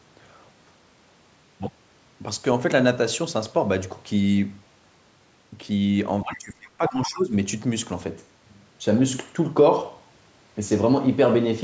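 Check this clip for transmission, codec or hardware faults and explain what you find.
One fault turns up in the speech, from 6.23 to 7.34 s: speech suppressed in double talk. The level drops by up to about 20 dB for roughly a second, likely because the echo canceller could not separate this side's talk from the loudspeaker echo of the far end and ducked both. On the waveform the envelope sinks; the spectrogram shows faded bands, with the call microphone processing's usual ceiling at 8 kHz.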